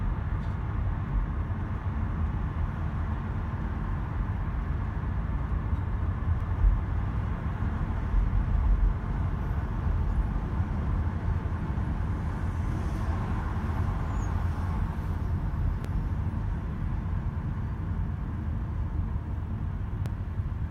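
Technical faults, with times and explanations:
6.41 s, 15.85 s and 20.06 s, dropped buffer (overrun): at each of these points the sound jumps abruptly forward, with no gap of silence. This is likely a missed read, where the hardware overwrote a block of samples before the program collected them, so the two sides of the lost piece are joined directly. Roughly 15 ms goes missing at the first jump and around 5 ms at each of the other two.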